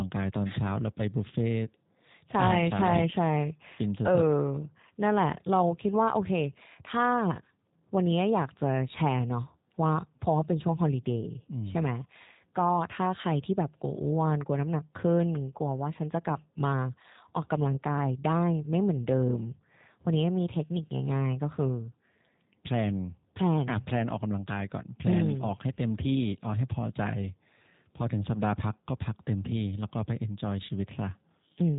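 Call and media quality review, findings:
G.729 codec, whole clip: speech sounds a bit rough and synthetic, with plainly audible codec damage and nothing above about 3.8 kHz, so it's dull and band-limited. Consistent with G.729A at what sounds like 8 kbit/s. Each 10 ms frame is rebuilt from a vocal tract filter, a pitch predictor and a handful of pulses, so fine detail is lost. Probable component: VoIP leg codec negotiation. Worth checking whether a wideband codec was on offer.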